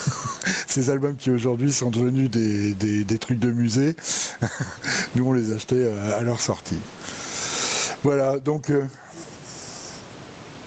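Speech whose gain swings by around 20 dB throughout: gain pumping, likely excessive input gain driving a fast limiter.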